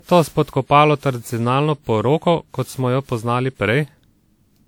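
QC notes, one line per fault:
Throughout: generation loss. The speech sounds swirly, hollow and smeared, with blurred consonant onsets and content reaching 20.1 kHz, likely from about seven lossy re-encodes, consistent with WMA near 96 kbit/s, each pass re-quantising on a shifted frame grid.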